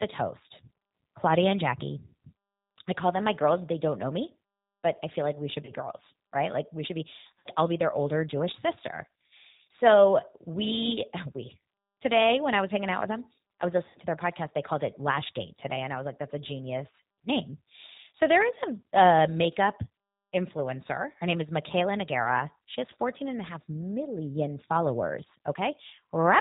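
Throughout, the speech carries plainly audible G.729 codec damage at 8 kbit/s: the voice is rebuilt from a vocal-tract filter and sparse pulses, so it sounds slightly rough and synthetic with nothing above 4 kHz. Unlike simple band-limiting, the roughness sits inside the voice itself.

VoIP packet loss concealed by the speech codec occurs three times. At 5.65 s, after "feel like we should" and before "girls right", about 30 ms is lost, which fits a single missing packet. At 7.39 s, between "we should be" and "I'll be their older", and at 13.89 s, between "with them I was" and "to their podcast", about 60 ms goes, which points to two packets each. The decoder stretches its last pitch and filter into a fading buzzy tone or coloured noise rather than leaving silence or a click, and the voice stays weak briefly afterwards.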